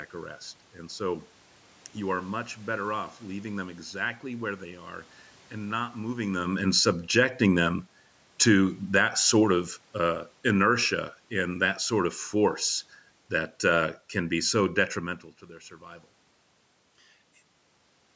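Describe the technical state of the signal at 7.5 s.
At 7.5 s the speech is sinking in level, and the room background sinks with it. This is automatic gain falling, running from 6.55 to 10.73 s, between "and not moving them" and "and that sort of". The gain control judged the input too loud, or its background noise too strong, and eased its gain down by about 5 dB.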